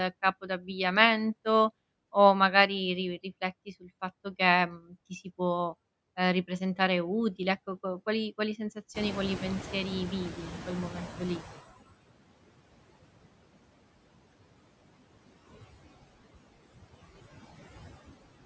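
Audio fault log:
Throughout: noise suppressor artifacts. The background is pulled down by about 20 dB, but the reduction is worked out band by band in short frames, so the residual noise dips in the gaps and swells back beneath each phrase. Unlike a clipped word, this is a constant pumping character spread across the whole recording, not a brief loss.
0.41–0.69 s and 3.66–3.89 s: speech cut by the noise suppressor. In each span, roughly a tenth of a second of speech is mistaken for noise and turned down with it, dropping by up to about 12 dB in the first and about 13 dB in the second. The second falls between "o magari ri" and "fatto che mhmm ti". Soft sounds go faint or seem swallowed. What sets this apart from the steady artifacts is that speech itself briefly sinks.
8.94–11.77 s: noise suppressor catching up. Starting right after "co qual quali", the room noise jumps by about 18 dB near 9 s. 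The suppressor's noise estimate lags behind that jump, so the louder noise first comes through with less reduction. Over about 2.8 s it gradually sinks as the estimate adapts, ending near 18 dB of reduction with the noise sitting about 15 dB under the speech. The slow downward glide in noise level, rather than any loss of speech, marks this fault.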